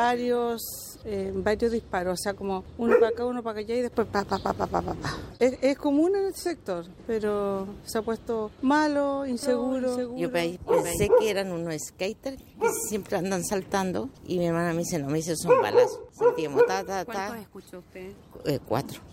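From 9.43 to 11.03 s, a doubled audio track: a dry copy roughly half a second behind and about 5 dB quieter, likely from a slower second capture path or two copies held out of step in an edit. The spectrogram shows every pattern repeated, shifted right, and the waveform's copy begins and ends abruptly.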